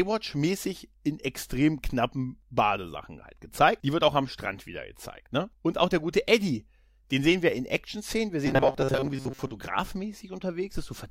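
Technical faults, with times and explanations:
8.47 to 9.52 s, robotic sound from repeated short buffers. The speech turns into a rigid, metallic buzz at 134 Hz that loosely follows the words. About half of the audio there is repeated. The likely cause is late-arriving audio, with gaps filled by repeating a 7.5 ms chunk.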